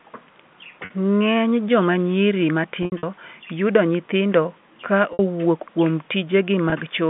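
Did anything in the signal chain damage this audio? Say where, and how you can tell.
Yes, packet loss with pitch repetition at the network stage, at 0.85–0.9, 2.83–3.03, 5.13–5.19 and 6.70–6.72 s. Gaps are bridged by repeating the last pitch period, shown as identical looped waveform cycles and frozen harmonics on a spectrogram.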